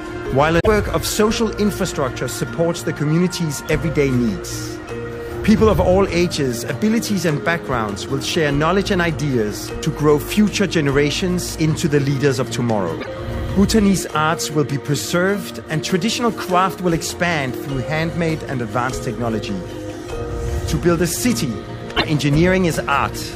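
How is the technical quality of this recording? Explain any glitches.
The recording has three short glitches, all the same problem: damaged data in a compressed stream. They hit at 0.59 to 0.67 s, 12.97 to 13.08 s, and 21.93 to 22.05 s, each roughly a tenth of a second. Some bytes in the encoded stream were corrupted there, so the decoder misreads those frames, loses sync and hunts for the next valid frame header. That comes out as a brief chirp or squawk before the sound picks up again.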